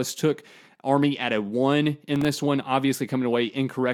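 In this speech recording, the processor missed a handful of sub-millisecond buffer deadlines between 2.16 and 2.25 s, leaving tiny silent gaps heard as a brief burst of processor overload crackle.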